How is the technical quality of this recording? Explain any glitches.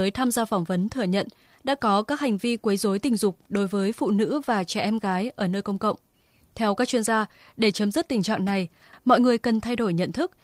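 One glitch stands out. From 0.83 to 0.85 s, between "tham gia phỏng" and "thừa nhận đã có", a lost packet was rebuilt from error correction: the next packet carried a low-bitrate copy, so the decoder filled the 20 ms without a gap, which fits one lost packet. That brief stretch sounds rougher and noisier.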